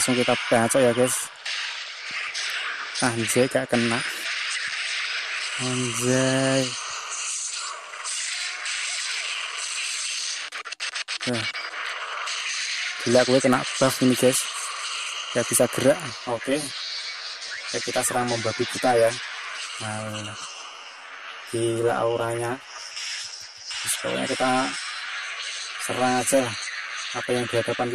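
From 16.10 s to the end, the sound turns hollow and phasey, with a fixed set of notches across the spectrum. This is channel delay causing comb filtering: one channel arrives around 10 ms after the other, and when the two are combined to mono, shared content cancels at evenly spaced frequencies, starting near 50 Hz and repeating roughly every 100 Hz upward.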